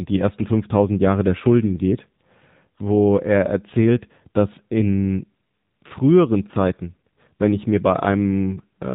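Speech throughout the clip has been through an AMR narrowband mobile codec, with plainly audible damage. Nothing above 4 kHz survives, and the pulse-excited vocal-tract model gives the voice a buzzy, synthetic edge, which fits a low AMR-NB mode around 7.4 kbps.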